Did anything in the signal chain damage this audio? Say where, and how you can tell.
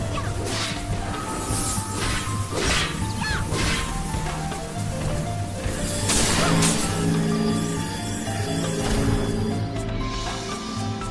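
No, nothing in the signal chain has left an audible mark on this audio. No stage from the wiring through to playback shows any sign of damage in what can be heard.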